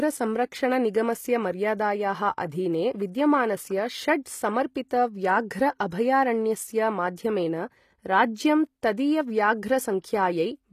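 Throughout the speech, s sounds turn gritty and lispy, with nothing above 14.9 kHz. The likely cause is HE-AAC compression near 24 kbps. Unlike a plain low-pass, the treble stays bright, but it is rebuilt from copied lower bands, so its harmonics misalign.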